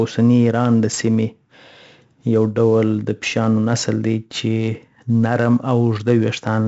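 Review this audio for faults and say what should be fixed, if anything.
4-bit ADPCM compression affects the speech clip throughout. Each sample is stored as a coarse 4-bit step from a prediction. The damage is heavy: gritty hiss follows every loud passage. Nothing sounds above 7.7 kHz, fitting a 16 kHz rate at 64 kbps. Export from a lossless master instead.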